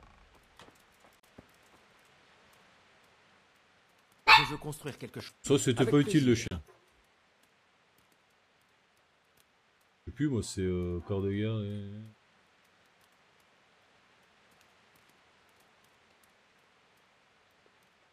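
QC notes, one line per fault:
1.20 s and 6.48 s: digital broadcast dropout. The audio snaps to silence for about 40 ms each time and then resumes mid-programme. The receiver muted after a corrupted or missing frame, and the length of each gap fits a single lost frame of about 32 ms. A very short fade of about 3 ms at the edges keeps it from clicking. On the waveform each shows as a flat gap; on a spectrogram, as a narrow, clean vertical blank band across all frequencies.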